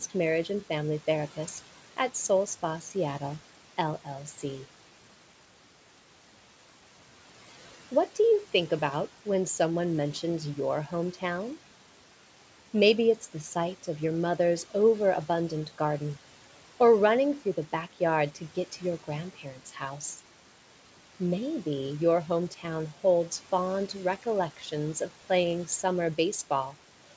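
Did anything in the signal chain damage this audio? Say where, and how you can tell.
Yes. Noise suppressor artifacts run throughout the clip in the call-processing stage: the background dips by about 12 dB between phrases, swelling back under speech.

Speech cut by the noise suppressor occurs at 19.36–19.76 s, after "to get to your", and 22.51–22.64 s, before "holds fond". The suppressor mistook quiet speech for noise, dropping it about 10 dB and 9 dB.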